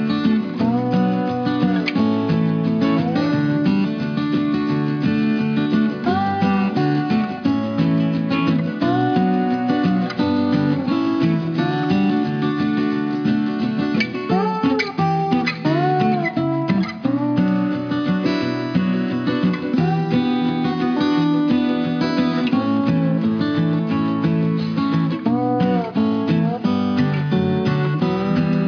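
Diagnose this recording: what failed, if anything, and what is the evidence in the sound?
Aliasing, introduced at the sample-format conversion stage and present throughout. Content that should have been removed before a rate reduction has folded back below the 5.5 kHz band edge, which fits a drop from 44.1 kHz to 11 kHz with no anti-alias filter. The folded energy lands on pitches unrelated to the source, roughly 25 dB under it, giving bright material a gritty, metallic edge. A properly filtered resample would sound dull but clean. Codec artefacts would swirl and vary over time rather than track the signal this way.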